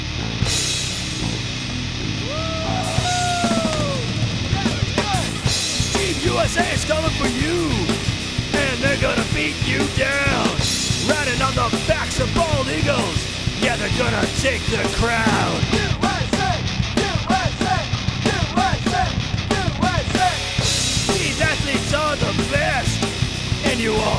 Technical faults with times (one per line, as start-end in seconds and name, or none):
none